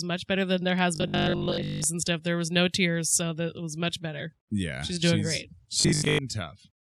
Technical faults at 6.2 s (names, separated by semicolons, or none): robotic sound from repeated short buffers